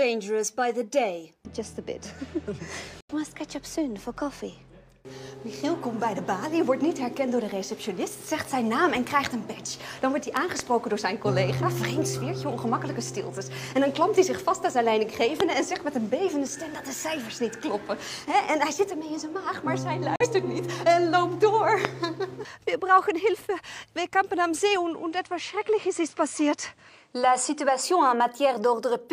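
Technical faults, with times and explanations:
3.01–3.13 s and 20.16–20.26 s, digital broadcast dropout. The sound snaps to silence through a fade of about 3 ms, then returns. The first hole loses about 85 ms. The second loses about 43 ms. Those lengths fit whole frames of roughly 43 ms, two and then one, failing at the receiver. It mutes rather than play damaged data. Whatever was sent in those gaps is gone.
10.37–10.62 s, 15.40 s and 21.85 s, loud pop. Sharp clicks sit on top of the sound, which carries on underneath. The first event is two pops in quick succession, peaking roughly 15 dB above the signal. The later two are single pops, roughly 20 dB above. The likely cause is a sudden voltage step, from a plug, switch, static or driver glitch, shaped by the circuits after it.
24.76–27.83 s, input switched to a poorer device. The sound turns duller for about three seconds, then clears. 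Nothing passes above 10.1 kHz here, so the top end is missing. The level stays the same and there is no gap at the switch. A new noise floor appears, roughly 35 dB below the signal. The likely cause is the system swapping to a narrower-band input and then back.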